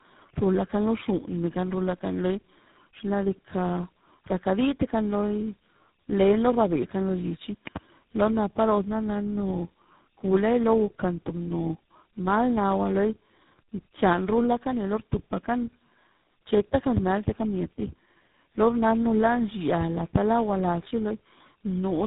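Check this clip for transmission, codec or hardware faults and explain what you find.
Two faults are present: tandem speech coding throughout, and a loud pop near 7.7 s.

Tandem speech coding runs through the whole speech clip. The roughness and warble point to three low-rate coders in series, consistent with iLBC, G.726 and GSM full rate, each re-encoding the previous one's damaged output. The speech is muffled, with nothing above 3.8 kHz.

A loud pop occurs from 7.67 to 7.79 s as two sharp clicks, roughly 15 dB above the speech, which continues underneath. A voltage step or pulse, likely from a connector, switch or static discharge, entered the signal and was shaped by the following circuitry.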